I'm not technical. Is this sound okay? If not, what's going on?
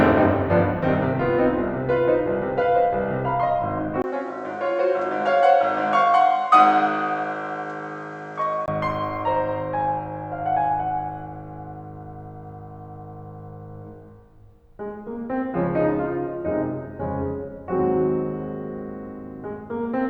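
No. From 4.02 to 8.68 seconds the music turns dull and a bit quieter, with nothing above 8.9 kHz, faint new background noise, and a brief gap as it starts. This is likely an input switched to a poorer device, another microphone or a headset, before the original returns.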